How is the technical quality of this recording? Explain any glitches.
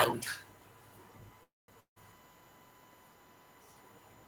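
The recording has three clear technical faults: a steady electrical whine and two breaks in the audio close together.

USB whine runs through the whole clip. It is a fixed tone at 1 kHz, strongest at that pitch, and sits roughly 25 dB below the speech. The USB bus draws current in regular 1 ms frames. That pulsing leaks into the audio path through shared power or ground. The result is a thin, constant whistle under everything.

A call audio freeze runs from 1.43 to 1.70 s. The speech stops and the last sound hangs on as a fading buzz. About 190 ms of this is near silence. The likely cause is packets held up in transit, so the jitter buffer ran dry. About 0.25 s was filled in. When the speech resumes, nothing has been lost. Everything after this point simply arrives about 0.25 s later.

A long network dropout follows from 1.80 to 1.98 s. Again the last sound is stretched into a decaying buzz, with about 90 ms of near silence. 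This time the speech returns further on. Roughly 160 ms of audio is simply gone, so a short piece is skipped. The likely cause is a stretch of packets that never arrived. The receiver covered it with about 160 ms of fill.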